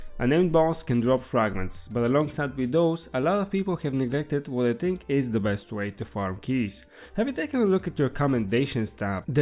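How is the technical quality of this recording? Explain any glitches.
Nothing here glitches or drops out. The recording just runs along without any hiccups to point to.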